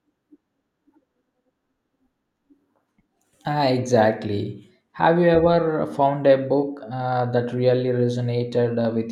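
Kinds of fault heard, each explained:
No technical faults can be heard anywhere in the signal.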